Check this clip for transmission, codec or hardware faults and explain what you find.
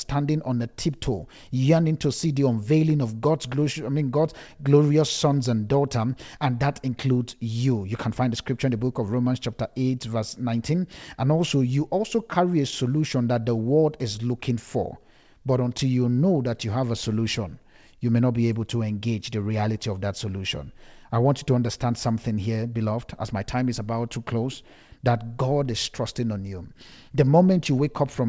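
Nothing wrong turns up here: the speech came over a call link whose sound stops at 8 kHz, which fits a wideband call codec such as G.722, and that ceiling is just how the path normally works.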